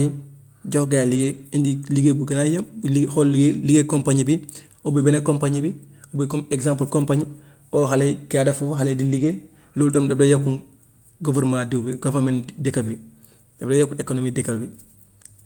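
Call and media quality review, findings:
Lost packet rebuilt from error correction: 1.13–1.39 s, 9.11–9.33 s (just before "loolu tam daf dee"), 11.31–11.49 s. No dropout. Brief rough, noisy patches where Opus in-band FEC low-bitrate copies were decoded. Waveform stays continuous; spectrogram shows grainier, smeared texture, no silent gap.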